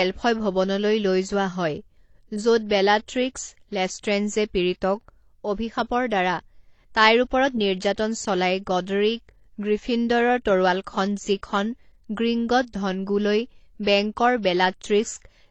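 Throughout the speech, nothing is heard above about 8.7 kHz, and artefacts of two different kinds sit on top of each other. The likely cause is transcoding between lossy codecs, with a low-bitrate AAC encode re-encoded as HE-AAC, piling the second codec's artefacts onto the first's.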